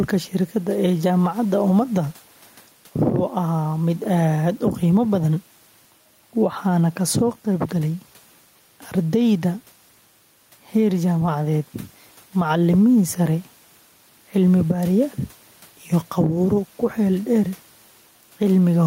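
Gain pumping runs through the whole of this speech recording. The room noise sits about 36 dB below the speech, and the gain swings by roughly 5 dB. The likely cause is input gain set far too high, with a fast limiter or compressor clamping down on each loud syllable, which squeezes loud and quiet passages together and leaves the speech sounding squashed.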